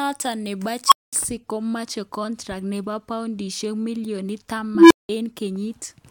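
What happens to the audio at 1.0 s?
An unstable filter runs away from 0.87 to 1.13 s: a tone near 1 kHz swells in 43 ms, overflows, then goes silent for 209 ms before "komoche contract nebo poudishek".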